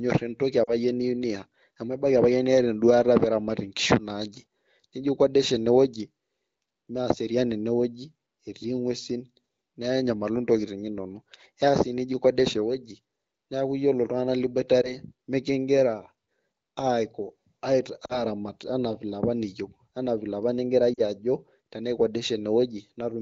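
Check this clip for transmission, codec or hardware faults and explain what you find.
Four brief dropouts interrupt the speech, at 0.64–0.72 s, 14.82–14.95 s, 18.05–18.24 s and 20.94–21.01 s. The single-frame loss at 14.82 s sounds like a short dip or warble, while the other three drop to near silence, with the voice returning weak or rough for a moment. These are lost AMR speech frames: corrupted frames were concealed by repeating the last good pitch and vocal tract settings at falling gain, consistent with one or two 20 ms frames per event over an AMR-WB (HD Voice) link.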